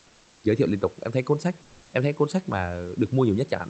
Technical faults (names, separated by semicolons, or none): comfort noise in place of the background